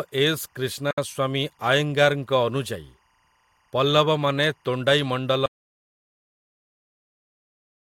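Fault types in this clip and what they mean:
Timecode bleed: Linear timecode leaks in from a nearby track or cable. A faint chirping warble, switching near 1 and 2 kHz at 24 frames per second, sits far below the speech throughout.
Gap at a join of encoded pieces: Separately encoded pieces were joined with their padding left in. At 0.91 s the speech breaks into a gap of about 69 ms, then continues where it stopped.
Audio dropout to silence: From 5.46 s the speech cuts off mid-flow into silence with no room tone. It never returns. The input was likely lost while recording continued.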